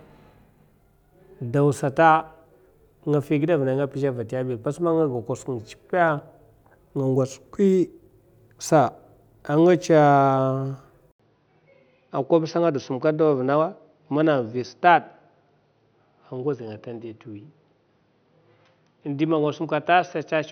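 At about 11.1 s there's a gap of roughly 80 ms, then the speech goes duller to the end, with nothing above about 6.1 kHz and a faint new noise floor roughly 50 dB below the speech, which stays at roughly the same level. That's likely the input switched to a poorer device.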